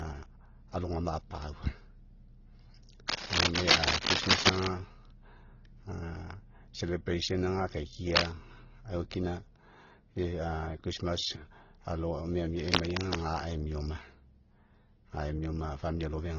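Speech that sounds smeared and watery throughout, with a dull, band-limited top and a mix of pre-echo blur, swirling tonal artefacts and coarse graininess that no single encoder would leave on its own. The likely cause is transcoding between lossy codecs: the layered damage points to an MP3 stage at a low bitrate, around 24 kbit/s, re-encoded to Opus at roughly 16 kbit/s, with each pass adding its own artefacts while the earlier bandwidth loss stays. Three bursts of dense, uneven scratching and rustling sit over the speech: from 3.08 to 4.67 s, about 10 dB louder than the speech, then a brief one from 8.16 to 8.35 s at about 5 dB above it, and from 12.59 to 13.22 s at roughly the speech's own level, ending just before "emia oma". This is cable scratch noise, probably from a worn cable, connector or control being moved so that its contact resistance fluctuates rapidly.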